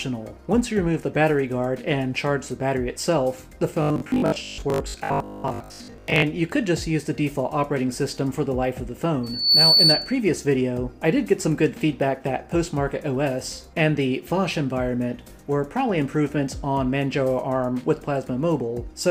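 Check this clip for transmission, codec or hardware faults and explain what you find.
Two faults can be heard. From 3.82 to 6.26 s there is robotic sound from repeated short buffers. New audio likely arrived too seldom, so the player kept looping the last fragment. Most of the real audio in this stretch is skipped. The loops impose a rigid 50 Hz buzz, which fits 20 ms repeats. The sound becomes metallic and mechanical.

From 9.23 to 10.21 s there is a loudspeaker feedback squeal. A microphone picked up the speaker it was feeding, and the loop gain passed one at 4.5 kHz. That tone fed itself and swelled over roughly a third of a second. It peaks at about 10 dB above the signal as a piercing whistle.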